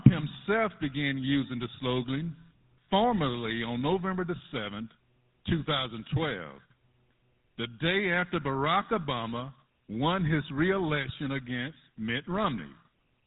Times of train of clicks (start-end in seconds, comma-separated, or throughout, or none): none